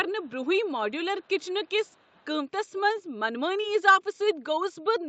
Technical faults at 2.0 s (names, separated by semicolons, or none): echo leak